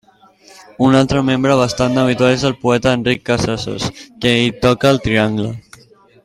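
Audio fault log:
Nothing faulty can be heard anywhere in the speech recording. The log therefore has no timed entries.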